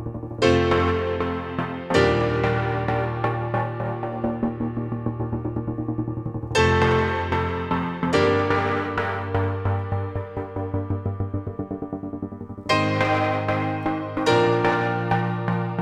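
Nothing goes wrong anywhere in the clip, so there's no problem to point out.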